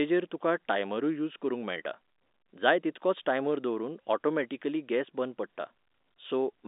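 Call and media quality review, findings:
No faults found; speech is carried over G.711 A-law at 64 kbps, band-limited to about 250 Hz–3.7 kHz as expected for a telephone line, with at most faint codec damage.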